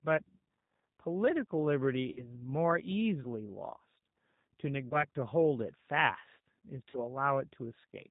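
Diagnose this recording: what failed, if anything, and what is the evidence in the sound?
Codec stage: G.729 at 8 kbit/s gives rough, synthetic speech throughout, and a spectrogram shows nothing above 4 kHz, a hard, flat ceiling.

Network stage: VoIP packet loss concealed by the speech codec at 2.12–2.25 s, 4.89–5.04 s and 6.90–6.98 s. Gaps of about 40, 20 and 40 ms become fading buzzy tones or coloured noise with smeared spectrogram harmonics.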